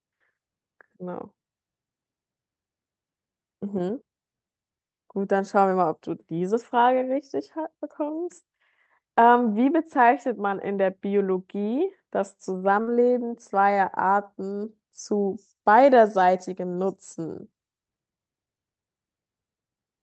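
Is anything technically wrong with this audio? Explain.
Yes, there is a burst of packet loss from 12.81 to 12.89 s. About 60 ms of speech never arrived, so the receiver stretched the last sound for roughly 58 ms while fading it, giving a brief held buzz or hiss. On a spectrogram, the harmonics freeze into flat horizontal bands and dim. The waveform shows a shrinking envelope, then a jump into later speech. The call codec's roll-off near 8 kHz, heard as dulled highs, points to Opus at a modest bitrate.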